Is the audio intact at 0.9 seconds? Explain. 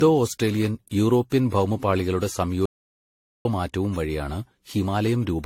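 No. Throughout the clip, including 0.9 s, the speech sounds swirly, smeared and hollow with blurred attacks, likely generation loss from roughly seven successive lossy AAC-style encodes, and nothing remains above 16.5 kHz.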